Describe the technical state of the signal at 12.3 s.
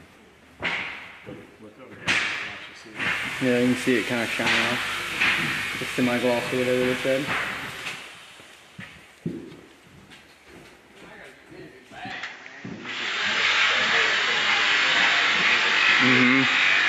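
At 12.3 s the sound sits inside a narrowed band running from 12.10 s to the end: nothing above 7.6 kHz, the level shifts by a few decibels, and a new background hiss appears roughly 30 dB below. The likely cause is an input switched to a poorer device. A new noise floor and tone arriving with the band cut, with no gap at the switch, set it apart from a simple low-pass filter.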